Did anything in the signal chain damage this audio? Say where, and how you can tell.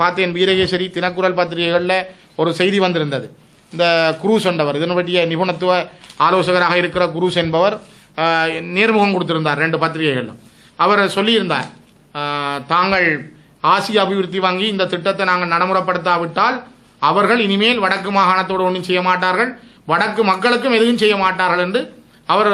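No, nothing in the signal chain audibly damaged this audio. There is no point in the recording where any stage, from capture through to playback, leaves a mark that can be heard.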